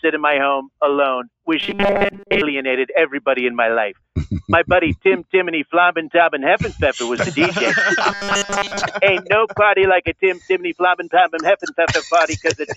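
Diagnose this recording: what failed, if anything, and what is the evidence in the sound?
At the call processing stage, a noise suppressor was applied to music or sounds throughout. Held tones and decaying tails sink by around 5 dB while attacks pass, so the sound pumps and thins. On a spectrogram, sustained partials fade out shortly after each onset; the waveform envelope sags between attacks. The lowest bass is filtered out, which is normal for the call's microphone path.

From 1.60 to 2.42 s and 8.10 to 8.83 s the sound turns into a rigid metallic buzz at 200 Hz. The likely cause is robotic sound from repeated short buffers at the driver or buffer stage: a roughly 5 ms chunk replayed in place of most of the missing audio. A spectrogram shows evenly spaced harmonics at multiples of 200 Hz. The waveform repeats identical 5 ms cycles.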